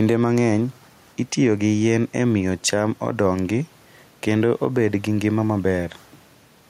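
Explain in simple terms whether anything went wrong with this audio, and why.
There's gain pumping all the way through this speech: loud and soft parts end up closer in level, and the level stays squashed. Most likely the mic gain is set too high and a fast limiter keeps clamping it.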